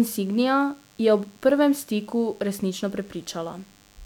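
From start to finish there's a DECT cordless phone buzz under the speech: a nearby handset or base is firing radio bursts 100 times a second, the audio circuitry rectifies them, and you get a thin, steady 100 Hz buzz full of harmonics, sitting roughly 35 dB below the speech.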